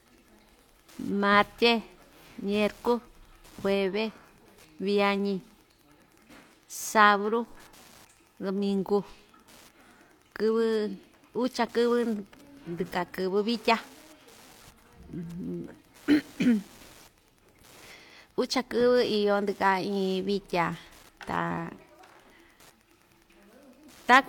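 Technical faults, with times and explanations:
Throughout, Wi-Fi interference: a faint, steady ticking about ten times a second, roughly 35 dB below the speech. It comes from a nearby Wi-Fi radio's beacons, spaced 102.4 ms apart and rectified by the audio circuit. Unlike the faster, denser 217 Hz buzz of GSM interference, these are separate ticks.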